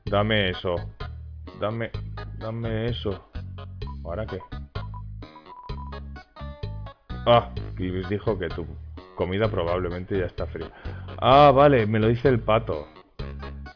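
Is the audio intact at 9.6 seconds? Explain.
Yes, the audio is intact at 9.6 seconds, with no dropout, click, distortion or other fault at that point.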